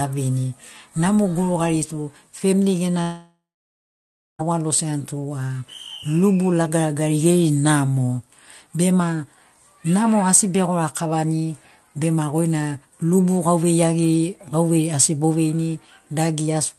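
Speech, carried over a call link whose Opus coding stops the highs around 12 kHz. From 3.01 to 4.41 s the sound breaks off. A fading buzz or hiss briefly stretches the last sound, then about a second of near silence follows. Speech resumes with that stretch gone. The likely cause is a long network dropout.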